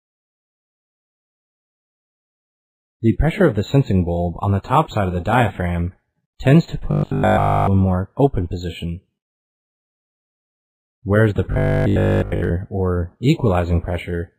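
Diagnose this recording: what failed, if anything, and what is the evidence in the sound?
Rigid metallic 50 Hz buzz at 6.91–7.69 s and 11.52–12.52 s: robotic sound from repeated short buffers, likely the driver looping 20 ms chunks.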